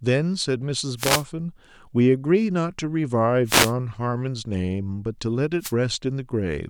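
Speech with three wireless microphone noise hits, at 0.96–1.25 s, 3.45–3.73 s and 5.59–5.73 s. Each is a brief swish of static. The FM radio signal fades, letting receiver noise rise over the voice.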